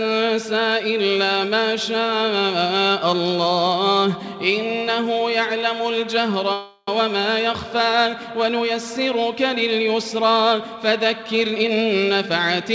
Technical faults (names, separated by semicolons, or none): call audio freeze; jitter buffer speed-up